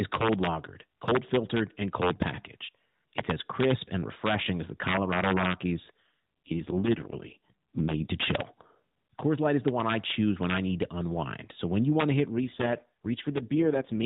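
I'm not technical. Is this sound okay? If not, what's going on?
No, not quite. Throughout the recording there's integer overflow: the loudest peaks of the speech run past the limit and wrap around, so you hear sharp, nasty cracks on a small share of the loudest moments. There are also two AMR rate drops, where the phone connection weakened and the codec switched to a lower quality mode. The voice turns rougher and more robotic from 6.02 to 8.13 s, just before "to chill", and again from 12.30 s, right after "you want to hit", to the end. Outside those stretches the phone-call sound is normal.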